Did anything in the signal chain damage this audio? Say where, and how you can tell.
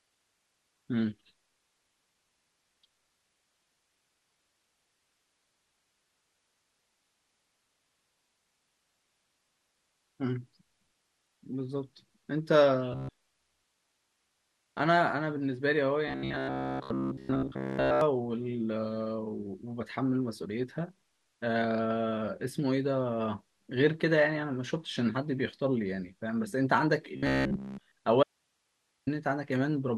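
Yes. Between 12.92 and 14.81 s, 16.08 and 18.01 s, and 27.17 and 27.95 s there is robotic sound from repeated short buffers, likely a driver or buffer underrun. A rigid 66.7 Hz buzz matches a repeated 15 ms buffer, with most of the real speech skipped. On a spectrogram this shows as a harmonic comb at 66.7 Hz spacing. On the waveform, identical 15 ms segments repeat.

From 28.23 to 29.07 s there is an audio dropout to a faint residue. For 836 ms the speech vanishes abruptly, leaving hiss about 50 dB below it. This is likely a break upstream while later stages stayed live. On a spectrogram it looks like a uniform low noise band with sharp vertical edges.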